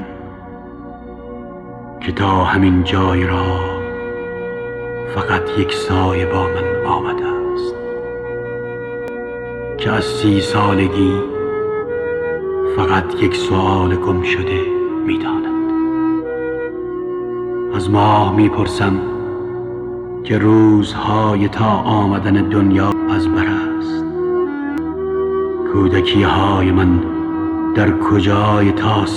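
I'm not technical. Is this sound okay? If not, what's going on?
No. There are three brief glitches, at 9.08, 22.92 and 24.78 seconds. Each is caused by damaged data in a compressed stream. Some of the stored file is wrong. The player misreads that part, loses its place, then recovers, leaving a short chirp or blip.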